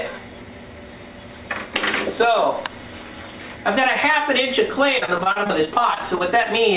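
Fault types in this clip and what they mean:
Repeated packet loss (robotic sound): from 4.98 to 6.47 s, short holes of up to 40 ms keep recurring, each patched by extending the preceding sound, giving a choppy sound with pieces missing. The spectrogram shows repeated smeared, frozen stripes, and the waveform shows looped, repetitive segments.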